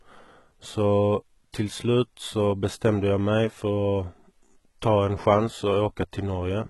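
Throughout this speech clip the s sounds come across gritty and metallic, with a bright but synthetic top that stops dead at about 11.8 kHz. The likely cause is heavy HE-AAC compression at a very low bitrate near 16 kbps, where the treble is rebuilt from copied lower bands.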